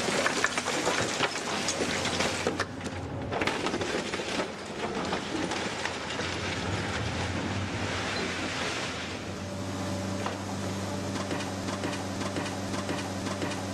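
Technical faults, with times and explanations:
11.64 to 13.74 s, broken-record loop: A 0.53 s fragment repeats exactly, back to back, four times and runs to the end. The player or stream likely stalled and kept resending the last piece it held. The audio due in that span is lost.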